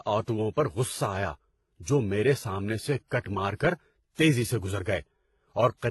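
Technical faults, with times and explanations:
Throughout, transcoding between lossy codecs: Nothing is present above 11.8 kHz, so the top end sounds dull. Two kinds of coding damage are heard together. The likely cause is a low-bitrate HE-AAC encode, around 16 kbit/s, later re-encoded to WMA at around 64 kbit/s. The second codec spends its bits preserving the first codec's artefacts, adds its own, and cannot restore the lost highs.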